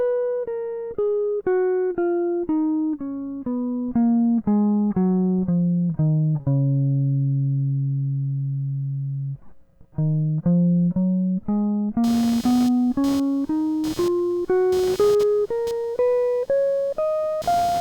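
A grounding fault lets the computer's own workload leak into the audio path: as processor, graphics or mouse activity changes the current drawn, the shared ground shifts and that movement rides on the signal. From 12.04 s until the end of the music, this computer activity noise appears as a chirping buzz pulsing at around 300 Hz, roughly 20 dB below the music. It tracks the machine's activity rather than anything in the music.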